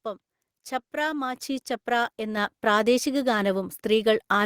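Microphone volume stepped up at 1.35 s: the input gain was raised in a single step of about 6 dB, so the speech and the background noise jump louder together.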